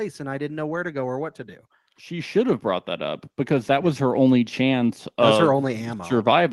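Automatic gain rising runs from 2.08 s to 4.28 s in this speech clip, starting just after "or what to do" and settling by "chance that was her". The automatic gain control judged the input too quiet and pushed its gain up by about 8 dB over roughly two seconds, so the voice and the background noise swell together rather than the voice alone getting louder. The audio arrives through a call path whose top end stops near 12 kHz.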